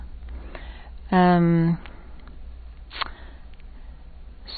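A speech recording with plainly audible damage throughout, likely from MP3 compression. Nothing remains above 4.5 kHz, which fits a starved bitrate around 24 kbps. Unlike a simple low-pass filter, the weak frequency detail flickers on and off, giving a watery, swirling texture.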